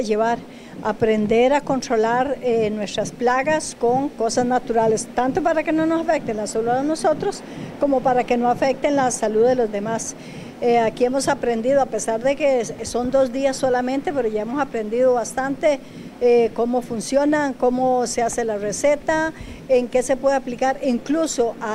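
No technical faults can be heard.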